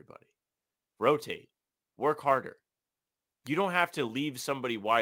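From the start, the speech carries sample clock jitter. The converter's clock wanders by a few microseconds, so each sample lands slightly off time. Steep, loud and bright sounds suffer most. This adds a rough hiss, roughly 30 dB below the speech, which disappears in pauses.

At 3.47 s, a sharp snap cuts across the speech. It is very brief and sits on top of the sound rather than replacing it. This is likely an electrical switching spike, from a nearby switch or discharge coupling into the audio line.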